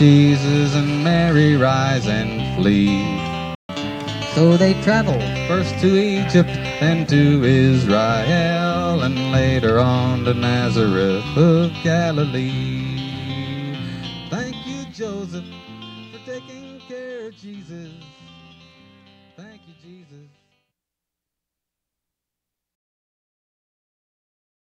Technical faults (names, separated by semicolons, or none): playback stall; catch-up at higher speed